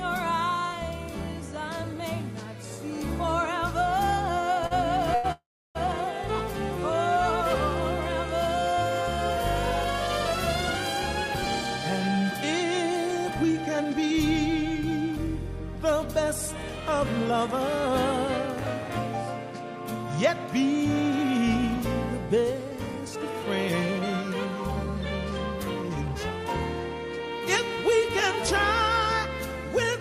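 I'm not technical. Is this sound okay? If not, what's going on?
No, it has three kinds of problem, all typical of audio sent over a network in real time.

At 4.67 s and again at 5.15 s there is a short stall from a late packet. A piece of the sound arrived late, so the player held the last bit of sound for about 0.04 s the first time and about 0.09 s the second. You hear a brief smear or slight buzz. Nothing is lost, and because they are so short these are different from the next problem.

From 5.32 s to 5.77 s there is a call audio freeze, a longer version of the same thing. The sound hangs, fading into roughly a third of a second of silence, then carries on exactly where it stopped. The likely cause is data held up on its way. It adds a gap of nearly half a second, but again nothing goes missing.

Later the player catches up on that delay with a jitter buffer speed-up, quietly trimming tiny slices out of the sound. 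From 12.08 s to 17.59 s it runs about 6% fast, dropping roughly a third of a second in total. It does the same from 22.64 s to 23.44 s at 11% and from 25.75 s to 26.45 s at 13%, removing around a tenth of a second each time. The pitch stays the same, which distinguishes this from a sped-up tape; the sound simply feels hurried.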